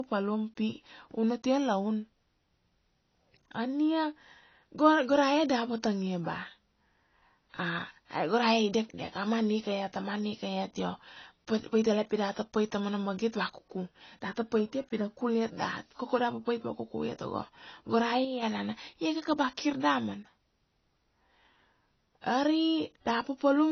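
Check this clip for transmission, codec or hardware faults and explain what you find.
Two faults are audible in the speech: a low-bitrate encode that runs throughout and a brief level dip near the end.

Low-bitrate audio saved at a high bitrate, throughout: the file is MP3, yet it still carries the artefacts of a much lower-rate encode. Those leftover artefacts point to an earlier low-rate encode, likely around 24 kbit/s AAC, that a later high-rate MP3 pass, perhaps 320 kbit/s, merely preserved.

One channel drops out, from 18.25 to 18.43 s: for under a fifth of a second the level falls abruptly by about 6 dB, then snaps back. The likely cause is one stereo channel vanishing, so the mono sum loses half of the material common to both sides.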